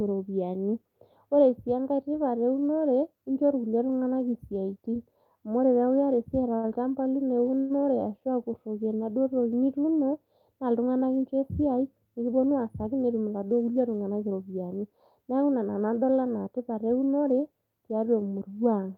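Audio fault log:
6.55–6.66 s, short stall from a late packet: one packet arrived about 80 ms late and the jitter buffer ran dry, so the receiver held the last sound for 80 ms until it came in, then resumed from the same point. Nothing is lost; the held sound is simply drawn out with a faint buzz or dip, and playback now runs 80 ms further behind than before the stall.
7.59–7.73 s, call audio freeze: the sound stops moving forward and the final fragment is extended as a fading buzz or hiss for about 104 ms, without falling to silence. This is likely packets held up in transit emptying the jitter buffer, with the receiver filling the wait. When delivery resumes, the audio carries on from where it halted, so a 104 ms gap is inserted and playback delay grows by the same amount.
12.32–13.25 s, jitter buffer speed-up: just after "na iltung'anak incho esiai" the speech runs about 10% fast at unchanged pitch until "iladuo kulie tung'anak iropiyiani". 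The buffer was holding more audio than its target, so the receiver trimmed out short pitch-period slices repeatedly, roughly 100 ms in total, pulling latency back down. The result sounds hurried rather than higher or chipmunk-like.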